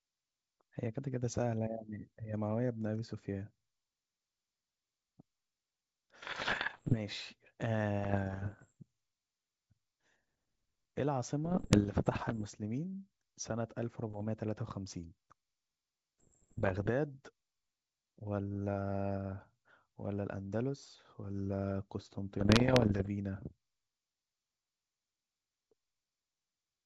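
From 6.22 to 7.00 s, 7.99 to 8.73 s, 11.45 to 12.45 s, 14.10 to 14.23 s, 16.19 to 16.91 s and 22.39 to 23.09 s the speech breaks into pops and rough, gravelly bursts with brief jumps in level. These are bit errors on an ADPCM link, heaviest in the first burst at a few percent. Each flipped bit knocks the decoder's step size and predictor off track, so the damage rings on for milliseconds. Unlike packet loss, there are no silent gaps or smooth concealment. The sound keeps running but comes out mangled. The G.722 coding around these bursts stays clear up to about 7 kHz, which fits the full 64 kbit/s mode.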